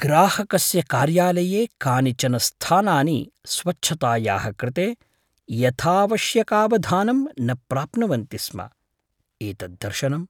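Nothing technically wrong turns up anywhere in this bit of speech, so there's no fault here to time or trace back to a cause.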